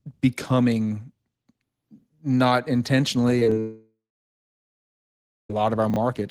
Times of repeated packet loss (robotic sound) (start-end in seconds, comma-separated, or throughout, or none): 3.39-3.52